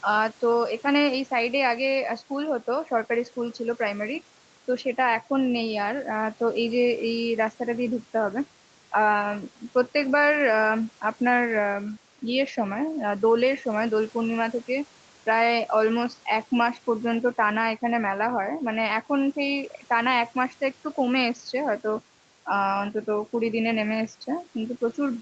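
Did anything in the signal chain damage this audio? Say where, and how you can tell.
No, nothing stood out on listening to this speech, and the top end stopping at about 8 kHz is what the Opus call path it went through normally does.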